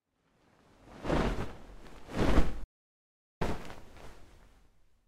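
Audio dropout to silence from 2.64 to 3.41 s: the sound cuts out to silence with no room tone for about 0.77 s, likely from a lost input while recording continued.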